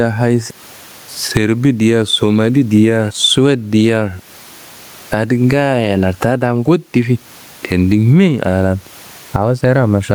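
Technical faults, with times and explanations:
Throughout, gain pumping: the room noise sits about 41 dB below the speech, and the gain swings by around 15 dB. Loud and quiet passages sit unnaturally close in level, giving a squashed, breathing quality. This likely comes from input gain set far too high for the microphone, with a fast limiter or compressor clamping down on every peak and releasing between them.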